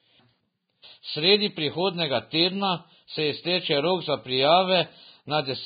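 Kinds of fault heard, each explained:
Vorbis compression: The speech runs through the whole clip with nothing above about 4.9 kHz, so it sounds dull and boxed in. The treble that remains is heavily damaged. Fine detail turns to grainy, hissy noise, consonants smear, and tones sound rough. This is likely low-rate Vorbis coding, where a smooth spectral floor carries the shape and a crudely quantised residue replaces the detail. The damage fits a bitrate around 16 kbps.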